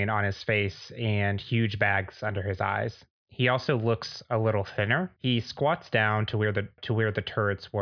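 No technical faults can be heard anywhere in this speech, so there is nothing to describe in time order.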